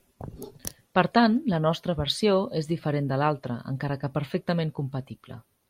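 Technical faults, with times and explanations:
No technical faults are audible.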